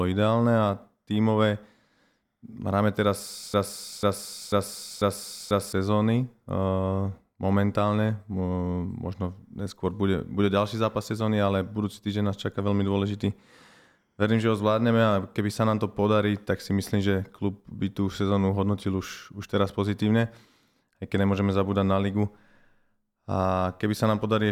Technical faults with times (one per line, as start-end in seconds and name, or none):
3.54-5.73 broken-record loop